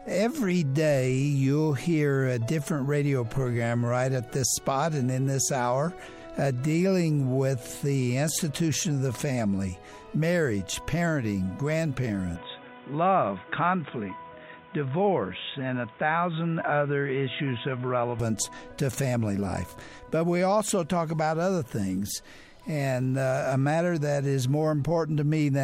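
At 12.36 s the sound abruptly loses its top end: nothing reaches above 3.8 kHz, so it turns dull and boxy, and a new background noise appears, sitting roughly 30 dB below the signal. There is no gap at the change and the level stays much the same. At 18.2 s the full bandwidth and the earlier background return just as suddenly. The likely cause is the input switching to a poorer device, such as another microphone or a headset's call profile, and then back.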